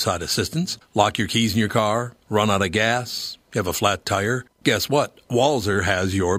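Speech recording, with nothing technically wrong that can be heard in it.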